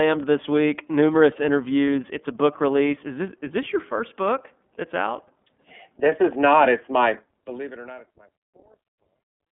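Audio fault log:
Throughout: iLBC codec. Band-limited to 200 Hz–3.5 kHz with plainly rough, synthetic speech, which fits 30 ms frames coded independently at 13.33 kbps.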